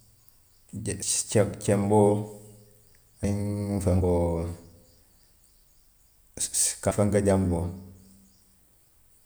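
At 1.02, 3.24, 4.01, 5.80 and 6.91 s the speech jumps abruptly, each time skipping ahead with no gap of silence. The likely cause is a dropped buffer (overrun), where incoming audio was overwritten before the software collected it. Around a tenth of a second vanishes at most joins, but nearer three tenths at 5.80 s. A waveform shows a sudden discontinuity, and a spectrogram shows a thin vertical broadband line where the two sides meet.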